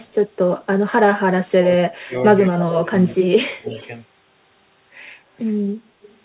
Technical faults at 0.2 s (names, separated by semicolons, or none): none